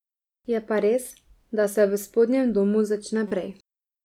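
At 3.28 s, right after "se v spodnjem domu", a corrupt frame is decoded. It lasts until 3.32 s, about 36 ms. Damaged bits in the compressed stream reached the decoder, which played the frames anyway. The misread data spans a couple of frames. Its wrong gains and codes place energy at frequencies that do not belong to the speech. The result is a brief chirp, squeak, blip or burst of noise. It peaks around -25 dBFS.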